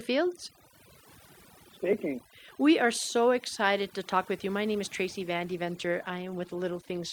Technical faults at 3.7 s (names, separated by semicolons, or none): overdone noise removal